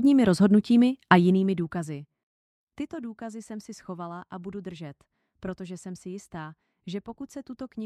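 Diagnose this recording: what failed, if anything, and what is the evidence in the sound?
Zipper noise from 1.16 to 2.18 s: a drop of around 20 dB applied in unsmoothed steps, roughly thirty a second, probably once per buffer in the gain stage, so it ticks.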